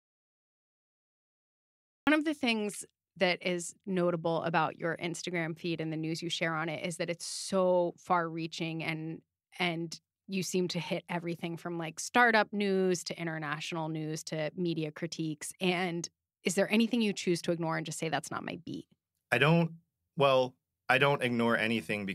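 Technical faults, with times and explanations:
0.0–2.07 s, audio dropout to silence: the clip opens in silence, with no room tone at all, and the speech enters abruptly at 2.07 s on "of the things that", already mid-phrase. The input signal was likely lost, through a disconnected device, a failed link or a mute, while the recorder kept writing silence, so whatever was said before that point is simply absent rather than faint.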